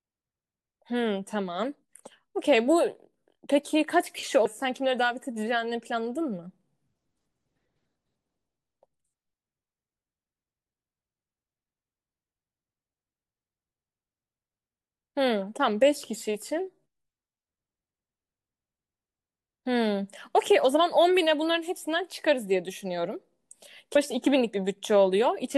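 At 4.45 s and 23.95 s the speech skips ahead, dropping roughly a third of a second, likely audio missing between 10-second chunks.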